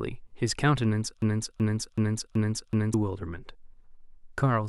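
At 1.22 s the speech catches in a broken-record loop: a 377 ms fragment plays five times back to back until 2.94 s, then the audio moves on. Most likely the player or stream stalled and kept resending its last chunk, so whatever should have played there is gone.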